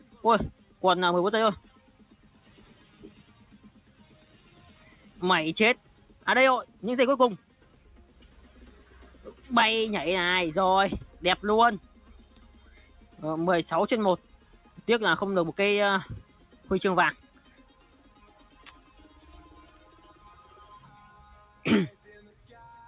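From start to finish, a noise suppressor applied to music or sounds is at work. It is a speech tool, left on by mistake. It treats steady parts of the sound as noise and pulls them down. Attacks pass through. Held tones and tails sink. The gain swings by around 10 dB as it reacts. The result pumps and flutters, and the sound thins out between onsets. All of it sits inside a call-style band with nothing above 4 kHz.

From 11.99 to 12.93 s, the suppressor cuts this sound harder than elsewhere. It mistakes the sound for noise and turns it down. The deepest drop is about 5 dB. Roughly 700 ms of that stretch is affected. Sustained and decaying parts lose level most. Their tails end early. Sharper onsets still come through. The passage sounds briefly recessed.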